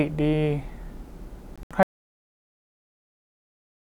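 From 1.56 to 1.71 s the speech breaks up into short holes of pure silence, about 93 ms missing in all across 149 ms, the longest gap 75 ms, with the speech picking up further along each time. This is a Bluetooth dropout, likely packets reaching the headphones too late and being discarded, consistent with a handful of lost packets.

At 1.83 s the signal cuts out completely and stays silent to the end of the clip, with no room tone underneath. This audio dropout to silence points to the input being lost mid-recording while the encoder kept writing silence.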